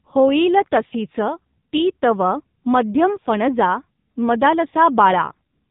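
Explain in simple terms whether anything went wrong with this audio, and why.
Something did go wrong: the whole recording, from start to finish, has passed through an AMR narrowband mobile codec, the kind used for 2G and 3G phone calls. It throws away everything above about 3.8 kHz, so the speech sounds muffled and boxy. It also rebuilds the voice from a simplified model of the throat and mouth using very little data, and the damage here is heavy, giving the voice a buzzy, synthetic, phone-line quality throughout.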